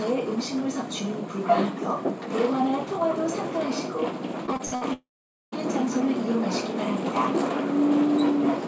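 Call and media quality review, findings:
Repeated packet loss (robotic sound), 4.46 to 4.83 s: choppy stretch with bits missing. Five holes in quick succession, longest 62 ms, with roughly half the span made up by concealment. Receiver's jitter buffer and decoder keep stretching the last fragment to cover each loss, so you get that robotic stutter rather than clean gaps. Band tops out at 8 kHz throughout, as you'd expect from G.722 at 64 kbps.

Long network dropout, 4.93 to 5.54 s: brief buzzy continuation of the last sound that fades, then about 0.48 s of dead air, and the audio picks up again further along with around 0.6 s simply gone. Likely a network outage where nothing arrived. Concealment can only bridge the first moments, after which the decoder gives up and goes quiet.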